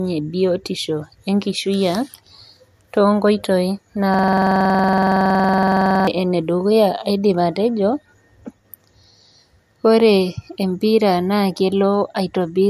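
From the start of the speech, a low-bitrate MP3 was likely encoded again at a high bitrate, a case of low-bitrate audio saved at a high bitrate. The second pass, which sounds like around 192 kbit/s, could not put back what a first pass near 64 kbit/s threw away. Nothing is present above 14.6 kHz, so the top end is cut flat, and the smeared, swirly texture of the earlier encoding carries through the whole clip.

From 4.14 to 6.07 s, the system hung while the sound hardware kept replaying the same stretch of its ring buffer, a system hang loop. One 46 ms slice, which fits a 2048-sample buffer, repeats exactly about forty times at 21.5 Hz. That fast loop rate makes the speech collapse into a rough, rattling buzz, closer to a stuck motor than a stutter, until normal playback resumes.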